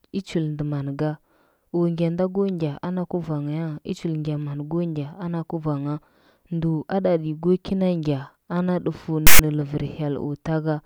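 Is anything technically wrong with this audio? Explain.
Yes. The speech is interrupted by one fault, file tags played as audio. At 9.27 s, right after "ana dufu", a harsh burst cuts in and lasts until 9.39 s, about 0.13 s. A block of text tags has been decoded as though it were sample data. Character bytes make poor waveforms. The result is a loud rasp pushed off-centre to one side. It starts and stops abruptly, with hard edges, like a sudden spurt of static.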